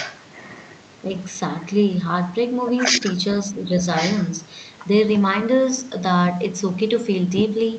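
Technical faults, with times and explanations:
0.00–0.21 s, 0.62–0.74 s and 3.96–4.31 s, echo leak: a delayed copy of the talker returns about 1.1 s after the original. It is about 10 dB below the direct speech in the first and last stretches and only a faint trace, about 30 dB down, at 0.62 s. The likely cause is the far end playing the call on a loudspeaker with an echo canceller that failed to remove everything its microphone picked up, so that leftover signal travelled back through the call's round trip.
3.47–3.80 s, speech suppressed in double talk: for roughly 0.3 s the talker's level sags, by about 5 dB at its deepest, while the other side is also speaking. This is likely the echo canceller failing to tell the local voice from loudspeaker echo during overlapping talk and attenuating both. The result is a brief dip rather than a full dropout. The audio's upper limit near 8 kHz is consistent with the Opus call path and is not part of this fault.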